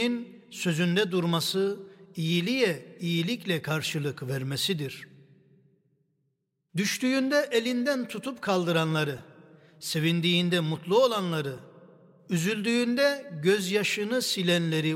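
Two brief repeated-buffer faults interrupt the audio, at 9.18 s and 11.58 s. Each time, fresh audio evidently failed to reach the output in time, so a piece about 2.9 ms long (which fits a 128-sample buffer) was played again. At 9.18 s it plays four extra times, giving a short buzz near 345 Hz. At 11.58 s it repeats once, heard as a click. On a waveform, identical 2.9 ms segments sit side by side with abrupt joins. A spectrogram shows thin vertical broadband lines at each join. Essentially no audio is lost.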